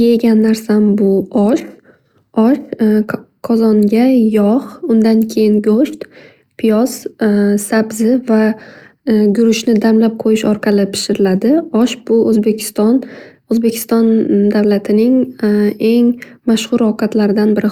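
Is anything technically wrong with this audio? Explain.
Yes. Sample clock jitter runs throughout: a timing wobble of a microsecond or two adds roughness about 45 dB down that, unlike steady hiss, swells on loud, bright speech and vanishes in pauses.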